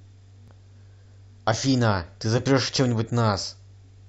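At 0.48 to 0.50 s, 2.46 s and 3.44 s the speech is hit by overlap between stream segments, aligned to segment boundaries about 1 s apart. Where neighbouring segments' time stamps claim the same stretch, the player trims the supposed duplicate, so 6 to 20 milliseconds of real speech vanish and the signal jumps. Each sounds like a small click or skip. The waveform shows an abrupt step, and the spectrogram shows a thin vertical broadband line.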